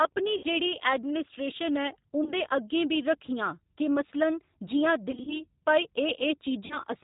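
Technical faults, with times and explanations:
Throughout: G.729 codec. The speech has been carried through an 8 kbit/s G.729-family coder, and the damage is plainly audible. Each 10 ms frame is rebuilt from a vocal tract filter, a pitch predictor and a handful of pulses, so the voice comes out rough and slightly synthetic. Nothing above 4 kHz survives, which dulls sibilants and leaves a narrowband telephone character.
0.37 to 0.44 s, 2.24 to 2.33 s, 5.11 to 5.42 s, 6.66 to 6.79 s: VoIP packet loss concealed by the speech codec. Audio went missing in each of these stretches, about 60 ms, 20 ms, 100 ms and 40 ms respectively. At 5.11 s the losses are scattered across roughly 160 ms, with the longest gap 40 ms. The decoder filled each gap by repeating its last pitch and filter at falling gain, which stretches the sound into a buzzy tone or coloured noise that fades out. Because each frame builds on the previous one, the voice stays weak and distorted for a short time after audio resumes, so each disturbance extends past the lost portion itself.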